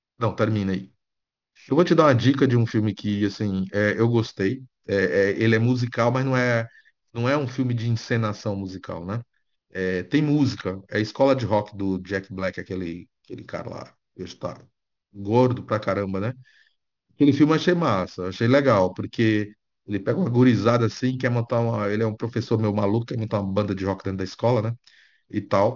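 Aliasing runs through the whole speech clip. Downsampling without a low-pass filter, which fits a 12 kHz rate, folds energy above 6 kHz back as gritty, metallic sibilants about 25 dB below the speech. A spectrogram shows mirrored streaks running hard up to 6 kHz.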